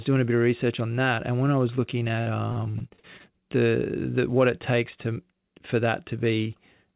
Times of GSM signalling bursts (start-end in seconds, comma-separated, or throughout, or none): none